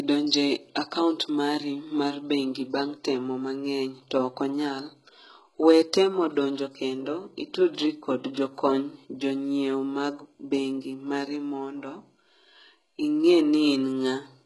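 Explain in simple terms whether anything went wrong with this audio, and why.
HE-AAC compression, throughout: the speech sounds heavily squeezed, with nothing above 11.5 kHz. This is likely from a codec that stores only the lower frequencies and rebuilds the treble by copying them upward, so s sounds come out gritty, metallic or lispy.

Pre-echo, from 8.34 to 8.36 s: a short hiss arrives about 24 ms before a sharp attack, which sounds softened. The codec spread its noise across a whole chunk of sound, so that noise leaked into the quiet moment before the attack.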